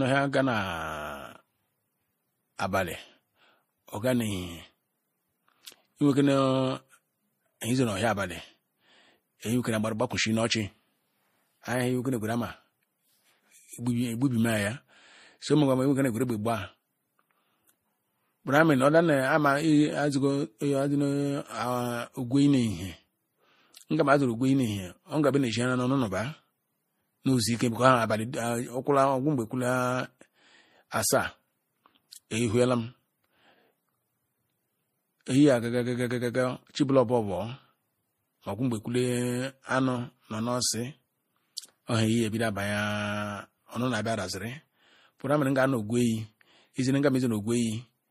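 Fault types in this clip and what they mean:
Transcoding between lossy codecs: Mixed, layered compression artefacts throughout with nothing above 15.2 kHz, likely from MP3 re-encoded as Vorbis, each stage adding its own.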